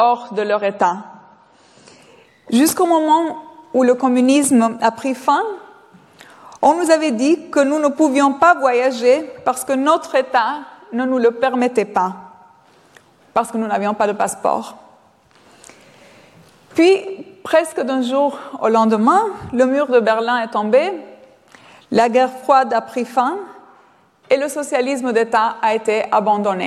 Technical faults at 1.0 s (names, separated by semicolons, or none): adaptive stream starting at a low bitrate